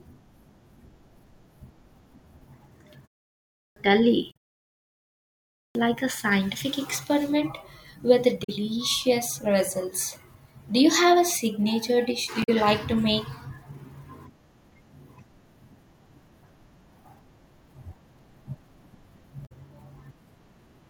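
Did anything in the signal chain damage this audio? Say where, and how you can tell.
Yes. At the playback stage there is a clipped start after a pause: at 3.42 s and at 5.41 s (just before "a scientific experiment with"), about 0.34 s of speech vanishes after silences of 0.43 s and 1.12 s. The output device was still waking. On the waveform the speech begins abruptly, with no rising onset.

At the codec or storage stage there is damaged data in a compressed stream, with roughly 70 ms disturbances at 4.30 s, 8.43 s (after "a scientific experiment with"), 12.42 s (between "a signature dish do" and "like to make") and 19.45 s. The decoder misread corrupt frames and resynchronised. A spectrogram shows brief breaks in the harmonic pattern.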